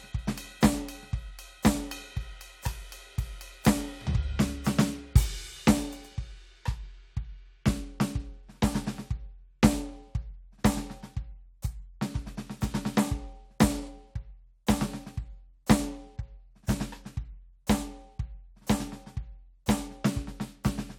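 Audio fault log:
No faults heard anywhere in this music.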